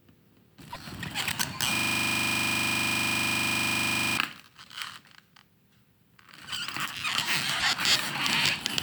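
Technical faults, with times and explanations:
0.72 to 0.76 s and 7.59 to 7.62 s: broken MP3 bit reservoir. Each event is brief and the sound skips ahead. The likely cause is dropped frames. The next frame then pulls borrowed bits from the wrong data. Each event spans about one or two frames of 26.1 ms.
1.75 to 4.18 s: system hang loop. A single 40 ms piece of audio repeats exactly, 61 times in a row. This gives a hard, rattling stutter at 25 Hz. The system froze while the sound hardware kept replaying the same short buffer.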